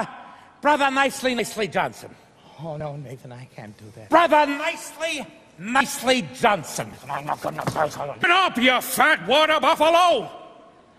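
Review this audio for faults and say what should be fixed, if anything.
Compressed frames are skipped at 1.39, 5.80 and 6.93 s, each losing about three 26.1 ms frames (roughly 70 ms), and at 8.23 s about seven (roughly 200 ms). Overlapping frames smear each join into a brief blip. Re-encode from an intact source to prevent it.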